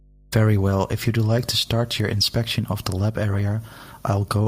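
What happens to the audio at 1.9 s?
At 1.9 s you're hearing mains hum, but it isn't a one-off event there. It runs steadily under the speech for the whole clip. It's a constant low drone at 50 Hz, sitting roughly 30 dB below the speech, so it's quiet. That's the power line leaking into the signal path, typically through a ground loop or a transformer sitting too close to the cabling.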